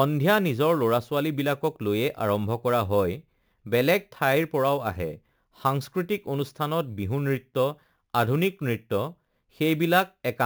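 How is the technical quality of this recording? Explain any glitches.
The recording has one clear flaw running throughout: imaging from sample-and-hold upsampling. Across the whole speech clip, a metallic fizz sits about 21 dB below the signal. Each sample was simply repeated to raise the rate, which fits an original 16 kHz rate, so no filter removed the mirrored spectrum. A spectrogram shows an inverted copy of the speech between 8 kHz and 16 kHz, and the zoomed waveform looks stair-stepped.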